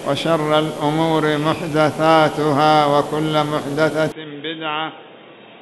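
At 4.12 s the sound abruptly goes dull and boxy and stays that way to the end, with no gap at the changeover. Everything above about 3.8 kHz is simply gone, the level falls by roughly 10 dB, and a faint new noise floor, around 40 dB down, comes in underneath. That combination most likely means the input switched to a poorer device partway through, say another mic or a headset in call mode.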